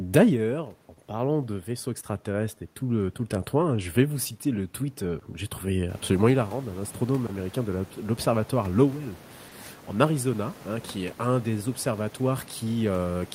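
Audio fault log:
throughout: clock drift between sender and receiver. The sender's clock is running a touch slow, around one and a half percent behind the receiver's. The jitter buffer keeps draining, so the receiver has to pad things out with small repeats to keep going. That's why the timing never quite settles and the little hiccups turn up at uneven spacing rather than on a steady beat.
0.38–8.55 s: repeated timing corrections. This is the drift being handled in practice. Across this stretch the receiver keeps slipping in short repeated pieces, all stretching the speech, with playback running at about 98% pace. It adds up to something like 150 ms overall. Each edit is tiny, so you'd mostly notice a faintly sluggish, slightly uneven delivery. The room noise comes up by about 15 dB around 6 s, but that's the room, not the link.
9.49–9.54 s: short stall from a late packet. A packet simply didn't show up in time and the buffer ran dry for a moment. 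The receiver held the last bit of sound for about 30 ms until it arrived, then carried on from the same spot, so nothing is lost. You hear a brief smear where one sound hangs on too long, maybe with a slight buzzy dip.
10.98–13.13 s: repeated timing corrections. Same story as the earlier run. The slow sender keeps the buffer short, and the receiver keeps stretching things with small repeats at about 98% pace, adding around a twentieth of a second here. It comes across as a faint drag or wobble in the tempo toward the end rather than any obvious glitch.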